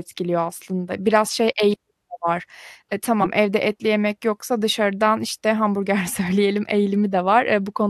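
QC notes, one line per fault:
3.21–3.27 s, compressed frames skipped: right after "eğilimi de var eee" and before "evde etli yemek yoksa", the speech jumps forward by around 50 ms of audio. Whole coded frames never reached the output, so the audio skips ahead by their length at the join.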